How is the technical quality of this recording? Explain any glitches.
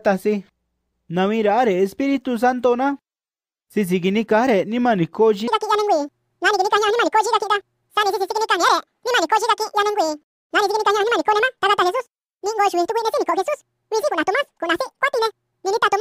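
The technical quality breaks down partway through. From 5.48 s to the end, the audio is read two samples at a time, at double speed. The player treats each pair of samples as one frame. So the sound runs twice as fast and 12 semitones higher, a full octave.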